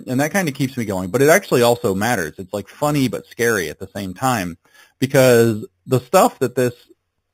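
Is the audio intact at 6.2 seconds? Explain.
No. At 6.2 s the speech carries imaging from sample-and-hold upsampling, present throughout the clip. Each original sample was repeated with no smoothing filter, which fits an 8 kHz source raised to 48 kHz, so mirrored copies of the spectrum sit around every multiple of 8 kHz. The lowest copy fills 4 to 8 kHz at about -16 dB relative to the signal. It is heard as a bright metallic fizz that rises and falls with the speech.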